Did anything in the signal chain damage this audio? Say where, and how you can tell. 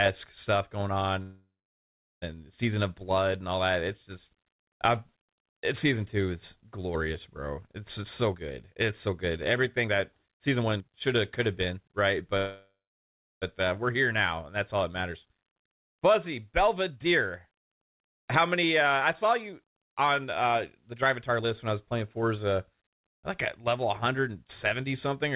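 Yes. At the network and jitter-buffer stage, there are two freezes. Right after "stuff going on", from 1.22 to 2.24 s, the last sound stretches into a fading buzz and then roughly 0.74 s of silence. From 12.37 to 13.44 s, just before "uh we're", about 0.7 s of it is silent. Each time, speech resumes exactly where it stopped, with nothing skipped and the delay about 1 s longer. That is a call audio freeze, likely from packets held up until the jitter buffer ran dry. A packet-loss dropout would lose material instead.

The jitter buffer speed-up also happens at that buffer stage. Speech runs hurried at unchanged pitch from 8.02 to 12.33 s at 117% speed, ending just before "uh we're". It happens again from 16.60 to 22.02 s at 111%, and from 23.58 to 24.81 s at 108%. The receiver trimmed whole pitch periods repeatedly to shed excess delay, about 0.7 s in each of the first two stretches and about a tenth of a second in the last. 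The steady pitch separates this from a resampling error, which would raise pitch along with speed. The G.711 mu-law path itself is audible as a band ending at 4 kHz, plus its usual coding noise.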